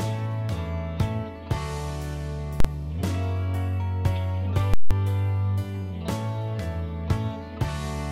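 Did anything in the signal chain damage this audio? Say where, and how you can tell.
Yes. Invalid numbers at full scale appear at 2.60 to 2.65 s and at 4.74 to 4.91 s, from a processing stage whose maths produced infinite or invalid values that sample-format conversion then pinned to the maximum. The first block lasts about 43 ms and is heard as one sharp bang. The second lasts about 171 ms and gives a loud pop in, silence, then a pop out. Those lengths fit 2048- and 8192-sample blocks.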